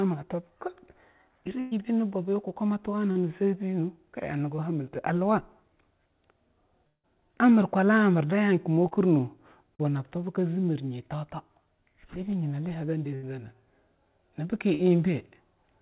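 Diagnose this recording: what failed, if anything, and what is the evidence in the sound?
Network stage, burst of packet loss: consecutive packets failed to arrive at 1.6 to 1.74 s and 13.15 to 13.26 s. The decoder extended the last sound for about 110 ms and 75 ms, fading it, before the speech resumed with roughly 120 ms and 80 ms missing.

Network stage, short concealed packet loss: brief holes of about 40 ms at 3.11, 8.87, 9.75 and 14.75 s were patched by continuing the preceding sound and crossfading back. Each is heard as a quick smear or wobble in the speech.

Network stage, likely a long network dropout: at 6.87 to 7.06 s the sound is stretched into a decaying buzz or hiss for about 160 ms, then goes silent for about 80 ms. It returns with roughly 160 ms of speech gone. The G.711 mu-law path caps content at 4 kHz.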